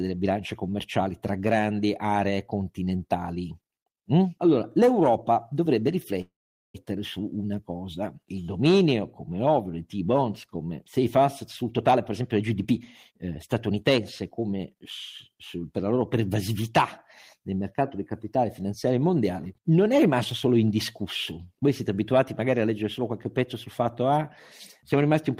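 At 6.21 s the speech stops for a call audio freeze lasting until 6.76 s, likely because delayed packets left the jitter buffer empty. The last sound decays into about 0.42 s of silence, then speech resumes where it left off, nothing lost but 0.53 s later.

A jitter buffer speed-up follows from 11.62 to 13.99 s, running at 119% as the receiver trims pitch-period slices to shed roughly half a second of backlog. A second, from 14.39 to 14.83 s, runs at 112% and removes around 70 ms. The speech sounds hurried at unchanged pitch.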